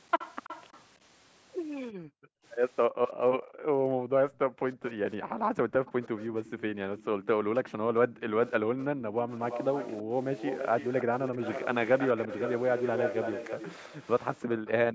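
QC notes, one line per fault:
0.19–0.82 s, echo leak: the far end's echo canceller likely let loudspeaker pickup through, so a copy of the speech returns 327 ms late, about 15 dB down.
1.92–4.62 s, background gated by the echo canceller: the canceller clamped the microphone during playback, so room sound drops out by up to about 40 dB, around two seconds in all.
4.73–4.93 s, echo leak: residual loudspeaker pickup likely escaped cancellation, leaving a brief faint repeat 327 ms behind the speech, about 25 dB down.
5.2–5.85 s, background gated by the echo canceller: the microphone was pulled down while the loudspeaker played, so the room sound dips by up to about 19 dB for half a second.
5.85–8.84 s, echo leak: incomplete cancellation likely passed the loudspeaker signal back, so a 327 ms delayed copy trails the speech, about 20 dB down.
6.54–9.16 s, background gated by the echo canceller: the canceller pumped the microphone gain, so the background sinks by up to about 12 dB, roughly a second and a half in total.
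9.38–14.7 s, echo leak: the canceller likely failed to suppress the loudspeaker pickup, so a strong copy of the speech follows 327 ms later, only about 10 dB down.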